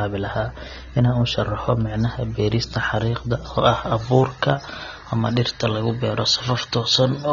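AAC compression, most likely, runs throughout the speech: nothing is heard above 6.9 kHz, and the sound is dull and smeared, with a fizzy warble on sibilants. Coarse quantisation of each frame's spectrum leaves these gaps, which fits a low AAC-LC bitrate around 24 kbps.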